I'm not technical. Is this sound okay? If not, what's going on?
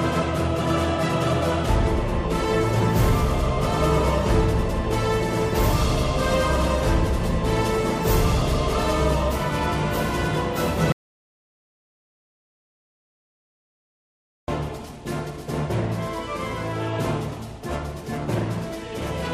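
No. At 10.92 seconds the sound stops abruptly and stays completely dead until 14.48 seconds, about 3.6 seconds lost. This is an audio dropout to silence, most likely from the input briefly failing, such as a loose connection or an accidental mute, while recording carried on. A natural pause would still carry faint background hiss or room noise. This gap has none at all, and whatever happened during it is missing.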